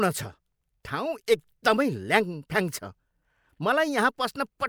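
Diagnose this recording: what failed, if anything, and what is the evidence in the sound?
Nothing failed; no faults found.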